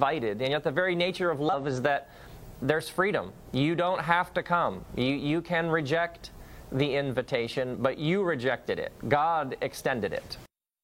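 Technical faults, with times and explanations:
1.49–1.52 s, damaged data in a compressed stream: a brief glitch of about 34 ms. Corrupted bytes in the encoded stream caused the decoder to misread the affected frames and lose sync, so playback was disrupted until it locked onto the next valid frame header.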